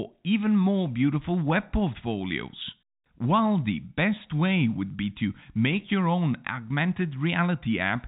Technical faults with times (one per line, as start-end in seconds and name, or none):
none